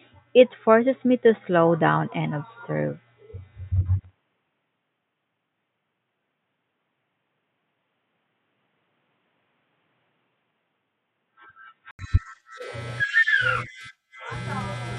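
From the start until 11.99 s, the input was likely switched to a poorer device with a narrower band. The speech carries nothing above 3.8 kHz, so it sounds dull and boxy, somewhat quieter, over a faint noise floor, until an 80 ms silence gives way to clearer sound.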